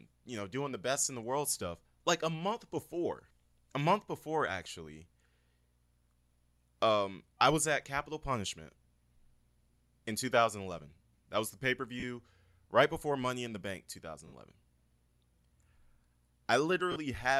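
Speech, with lost LE Audio frames at 12.00–12.04 s after "that was the", 14.27–14.34 s after "money in the bank", and 16.92–16.96 s, each a gap of 30, 60 and 40 ms filled by LC3 concealment. Unlike a clean dropout or repeated waveform stutter, the gap becomes a noisy smear, because the decoder reuses the last spectrum with random signs. Lossy compression is also present at a light level.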